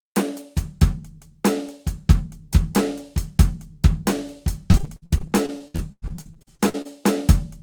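From 4.71 s to 6.87 s, packets in this music stream were repeatedly lost or arrived too late. The decoder covered each hole by extending the last received sound before the next hole arrived. That is repeated packet loss, heard as a robotic choppiness. Roughly two dozen short dropouts break up the music, the longest lasting about 98 ms, and about a third of that stretch is concealment filler rather than real signal.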